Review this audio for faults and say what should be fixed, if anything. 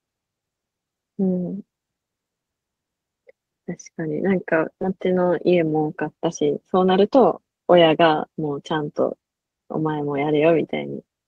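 Skip ahead at 4.81 s: the speech jumps forward with no gap, and roughly 0.4 s of what was said is missing. The stretch was discarded, either lost in transit or thrown out when the jitter buffer overflowed with later audio already waiting, so the two sides of the cut are spliced almost directly. The playback delay drops by about the same 0.4 s at that instant, which is why the cut sounds abrupt rather than like a pause.

Jitter buffer speed-up from 6.81 to 7.18 s: the speech runs at about 110% of normal speed with its pitch unchanged, so this short passage sounds hurried. The buffer was holding more audio than its target, typically after delayed packets arrive in a bunch, and the receiver drained the excess by snipping out short pieces one or a few pitch periods long, many times in a row, removing about 50 ms in total.

To prevent both, give the jitter buffer enough headroom and adapt its target gradually, so bursts of late packets are absorbed without overflowing or needing hard discards.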